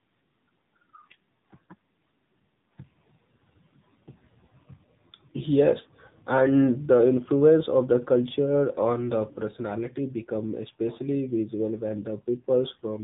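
Tandem speech coding runs through the whole recording. The speech crossed two speech codecs in a row, decoded and re-encoded at each border. The roughness points to a CVSD stage feeding, through a G.711 mu-law link, into AMR-NB at about 7.4 kbit/s. Each coder had to work on the damage left by the one before. Nothing reaches above 3.8 kHz. The speech sounds muffled, gritty and warbly, worse than any single link would make it.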